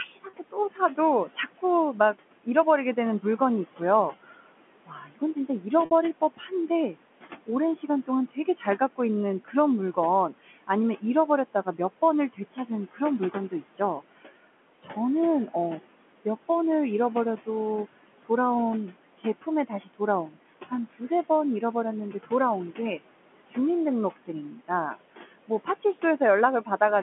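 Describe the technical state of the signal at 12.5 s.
At 12.5 s the signal sits inside a stretch of speech cut by the noise suppressor, running from 12.33 to 15.55 s. The suppressor misreads some quieter speech as background and pulls it down with the noise by as much as about 17 dB, adding up to roughly half a second across the span. Soft consonants and word endings sound swallowed or faint. On a waveform those segments shrink. On a spectrogram, weak high-frequency consonant energy and trailing syllables fade into near-blank patches.

The same moment carries noise suppressor artifacts that run through the whole clip. The room noise, which sits about 16 dB below the speech, is pushed down by about 18 dB in gaps and returns under the speech, so the floor pumps with the speech. A spectrogram shows a mottled, time-varying background that changes from frame to frame. All of this sits within the 200 Hz to 3.4 kHz band of the G.711 telephone line.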